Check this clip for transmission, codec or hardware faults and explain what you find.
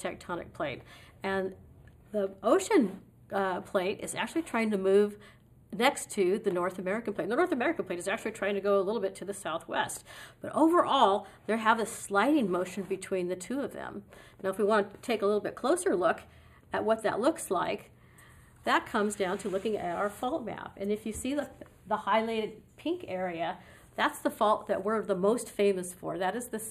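A channel delay causing comb filtering runs through the whole clip. One channel arrives roughly a tenth of a millisecond late, a lag of only a few samples, and the two are summed to mono. Components common to both cancel where they fall half a cycle apart, giving a first notch around 5 kHz and further notches spaced evenly above it. The sound is hollow and dulled in the upper range. On a spectrogram, the notches appear as dark horizontal bands that stay fixed across the full length.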